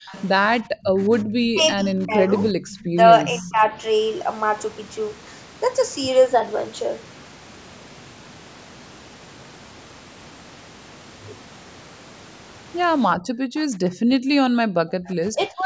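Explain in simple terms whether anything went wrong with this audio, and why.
Several things went wrong, all tied to the echo canceller on a speakerphone call.

Background gated by the echo canceller: while the loudspeaker was playing, the canceller turned the microphone down hard. The room sound briefly drops out at 0.00 to 0.07 s and, for about a second, between 13.16 and 14.65 s.

Echo leak: the canceller likely failed to remove all of the loudspeaker sound reaching its microphone, so some was sent back. A faint copy of the speech, arriving about 0.36 s late, is heard at 0.07 to 0.23 s, 3.29 to 3.53 s and 13.55 to 13.60 s.

Speech suppressed in double talk: when both sides talked at once, the canceller likely could not tell the talker from the echo and turned everything down. The voice dips at 0.84 to 2.38 s, 2.90 to 3.74 s, and most deeply from 14.93 s to the end.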